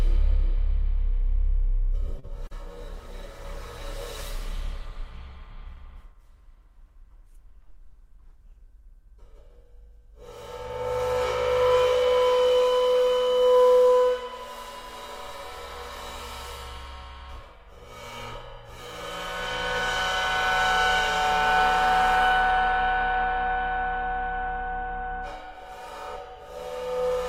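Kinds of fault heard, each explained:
Short stall from a late packet: a packet arrived late at 2.19 s and the jitter buffer ran dry, so the receiver held the last sound for about 38 ms until it came, then resumed without losing anything, leaving a brief stretched moment and adding 38 ms of delay.
Short concealed packet loss: at 2.47 s about 40 ms of audio never reached the decoder, and the receiver covered the gap by extending the preceding sound for roughly 34 ms before blending back, heard as a quick smear or wobble in the sound.
Call bitrate drop: from 2.89 s to 9.89 s the bandwidth estimate fell and the encoder was pushed from 64 kbps down to 18 kbps, holding the lowest rate for about 5.7 s, so the sound turns coarser and duller until the bitrate recovers.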